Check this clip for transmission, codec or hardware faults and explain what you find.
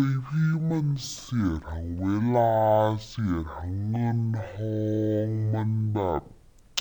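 One fault runs through the whole clip: stereo read as mono. The player took a two-channel stream and treated its alternating left and right samples as one continuous channel, so each stereo frame became two consecutive mono samples. Stretching the data to twice its proper length plays the speech at half speed and drops its pitch a full octave (12 semitones), giving a slow, deep, dragging sound from start to finish.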